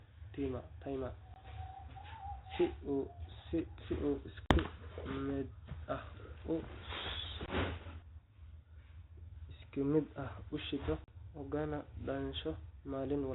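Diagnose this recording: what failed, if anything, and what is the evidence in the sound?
Network-stage packet loss on an ADPCM call: hard 20–40 ms holes at 1.34, 4.46, 7.46 and 11.04 s (after "ah u shido"), then a slightly distorted resync.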